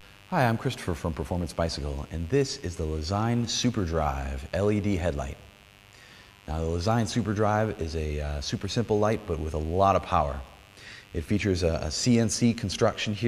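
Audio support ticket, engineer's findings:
Mains buzz, present for the whole clip. Steady raspy buzz on 50 Hz mains, roughly 30 dB under the programme. Probable component: a dimmer, rectifier or unshielded cable near the signal path. Switching spikes twice per mains cycle leak in and produce harmonics up to several kHz.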